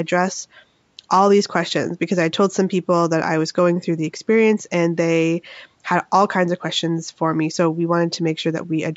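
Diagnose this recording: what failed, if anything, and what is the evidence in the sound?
Nothing failed in this recording.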